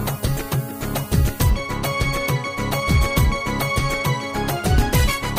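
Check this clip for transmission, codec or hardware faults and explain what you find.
One fault is present, confined to the opening of the clip. From 0.0 to 1.5 s there is low bit depth with noise shaping: the audio is quantised to about 6 bits, and the rounding error is pushed upward in frequency. The result is a thin, steady hiss climbing toward the top of the band, roughly 15 dB below the sound.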